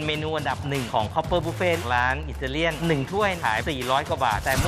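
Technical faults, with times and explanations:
Throughout, Wi-Fi interference: faint steady ticking ten times a second, roughly 25 dB down, as the circuit rectifies a nearby radio's 102.4 ms beacon.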